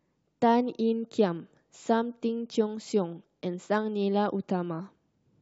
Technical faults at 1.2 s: none

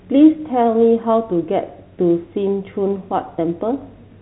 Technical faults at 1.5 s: none

